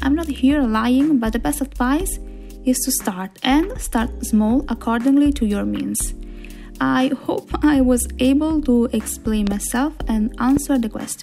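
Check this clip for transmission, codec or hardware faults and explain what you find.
Two loud pops stand out, both most likely from electrical transients such as a plug being disturbed, a switch, a static discharge or a driver glitch, each injecting a sudden voltage pulse that the downstream circuitry shapes into a sharp click. From 9.47 to 9.54 s there is a double pop, two hits in quick succession, and from 10.57 to 10.59 s a single one. Each peaks roughly 10 dB above the surrounding audio, which continues underneath.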